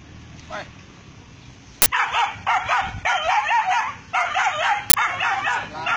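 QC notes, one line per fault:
1.82–1.86 s and 4.90–4.94 s, uninitialised buffer: two 40 ms blocks were played before any audio was written into them, so leftover memory came out as a sudden, loud burst of digital noise. A dropout would leave silence, and a click would be far shorter.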